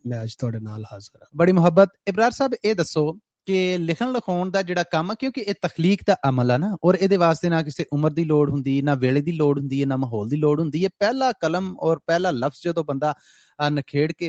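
From 1.14 to 1.36 s, the noise suppressor cuts sound it has mistaken for noise. The level sinks by up to about 16 dB for roughly 150 ms in total, so sustained or decaying parts dip and tails end abruptly. Content above 8 kHz is absent throughout, consistent with the call path's bandwidth.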